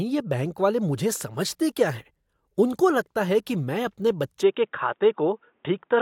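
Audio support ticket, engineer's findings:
Speech goes dull and boxy at 4.42 s through the end, nothing above 3.8 kHz. Input switched to a poorer device, likely a headset call profile or fallback mic. No gap at the switch, level holds, faint new noise floor underneath.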